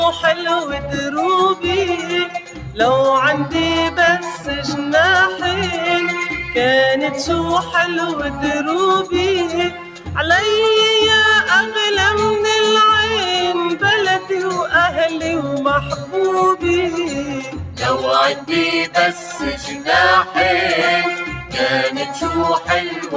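A noise suppressor built for speech was applied to music or sounds throughout. It treats steady and decaying material as noise, so the level swings by roughly 5 dB as held parts are pulled down and attacks pass, giving a pumping, thinned quality.

The sound is cut by the noise suppressor at 0.37–0.95 s, 1.55–2.74 s, 9.7–10.1 s, 15.98–16.14 s, 17.41–17.81 s, 18.35–20.34 s, 21.33–21.55 s and from 22.6 s to the end. Sustained or fading sound sinks by about 5 to 10 dB, deepest near 9.7 s and 18.35 s, and tails are clipped short.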